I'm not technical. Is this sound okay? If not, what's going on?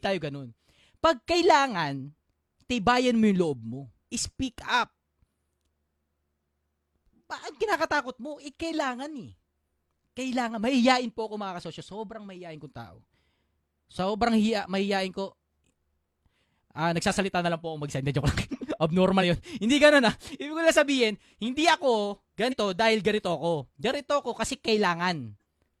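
No. Compressed frames were skipped: small chunks of the stored audio never played, so the speech jumps ahead. About a twentieth of a second is lost at 1.30 and 16.40 seconds, and about a tenth at 19.18 and 22.48 seconds.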